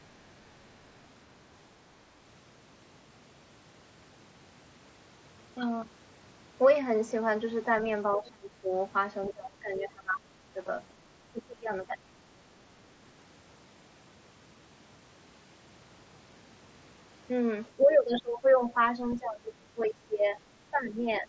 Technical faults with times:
7.22 concealed Bluetooth headset packet loss
8.10-8.71 speech suppressed in double talk
9.30-10.56 speech suppressed in double talk
11.32-12.20 speech suppressed in double talk
17.77-18.71 speech suppressed in double talk
19.10-19.16 other side's voice leaking through
19.17-20.40 speech suppressed in double talk
20.70-21.29 speech suppressed in double talk

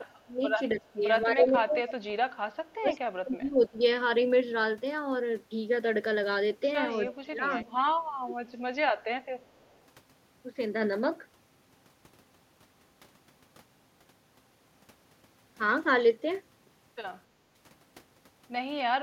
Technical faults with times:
0.27-1.75 speech suppressed in double talk
1.88-2.04 echo leak
2.81-3.79 speech suppressed in double talk
6.91-8.18 echo leak
7.17-8.36 speech suppressed in double talk
9.41-9.79 echo leak

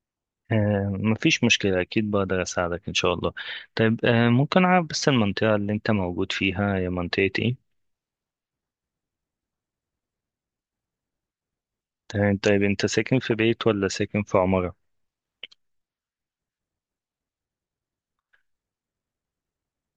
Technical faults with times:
none

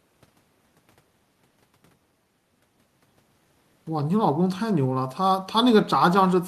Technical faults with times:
none

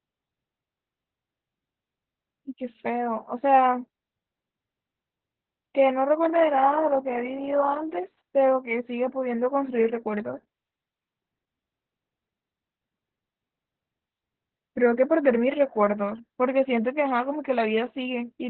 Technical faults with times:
0.00-18.50 Opus voice compression

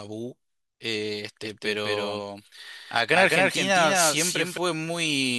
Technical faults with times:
1.43-4.57 doubled audio track

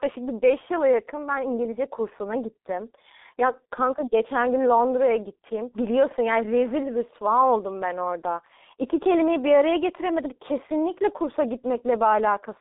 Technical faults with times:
0.00-12.61 G.723.1 codec

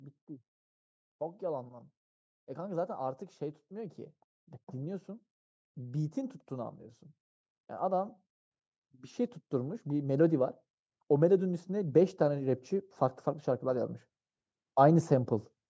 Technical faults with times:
9.50-15.23 automatic gain rising

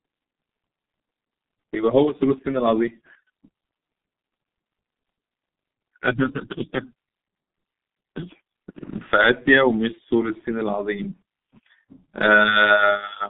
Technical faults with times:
0.00-13.29 G.723.1 codec

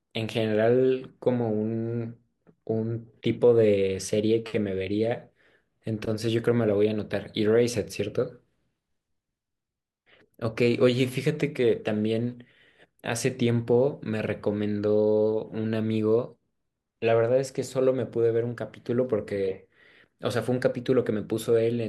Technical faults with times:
none

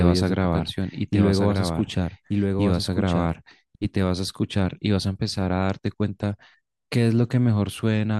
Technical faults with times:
0.00-3.32 doubled audio track

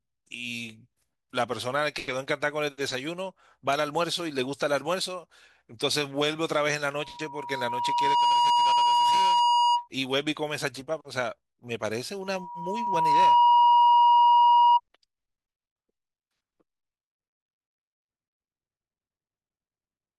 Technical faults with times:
6.93-9.88 loudspeaker feedback squeal
12.22-14.80 loudspeaker feedback squeal

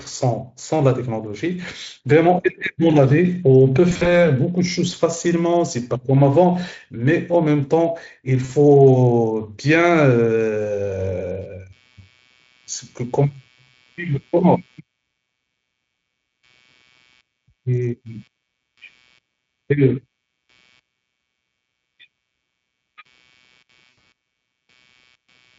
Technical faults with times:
3.89-4.16 VoIP packet loss concealed by the speech codec
8.45-8.50 VoIP packet loss concealed by the speech codec
9.80-25.59 computer activity noise
23.89-24.06 VoIP packet loss concealed by the speech codec

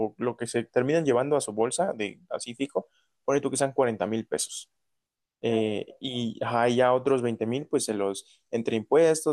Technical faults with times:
none

